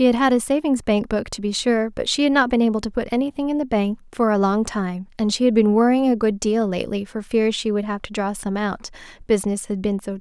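No technical faults are audible.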